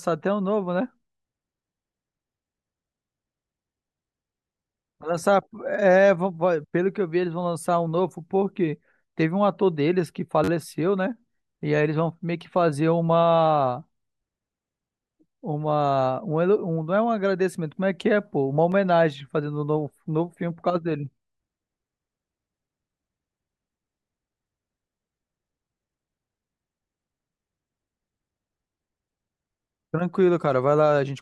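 Speech, with two repeated-buffer faults where late audio made the device replay its last buffer. At 10.44–10.49 s one roughly 10.7 ms piece plays four extra times, a brief buzz at about 94 Hz. At 18.72 s a single repeat gives a click. The length fits a 512-sample buffer, and essentially no audio is lost. The waveform shows identical repeated segments with hard steps at each join. The spectrogram shows thin vertical lines, with a harmonic comb during the 10.44 s burst.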